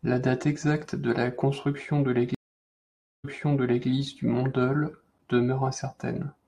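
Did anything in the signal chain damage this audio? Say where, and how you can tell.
Yes, network stage. A stream reconnect at 2.35 to 3.88 s leaves 892 ms of silence. A fresh decoder then resumes speech 640 ms earlier.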